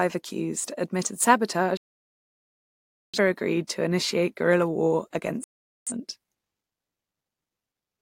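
At 1.77 s the speech cuts to silence for about 1.4 seconds, resuming at 3.18 s, and a second shorter hole runs from 5.44 to 5.92 s. Both are digital broadcast dropouts: the receiver stopped getting decodable frames, whether through signal loss or failed checksums, and muted its output until valid frames returned. The gap lengths point to a few dozen frames lost in the first and about ten in the second, and the speech sent during each gap never arrives.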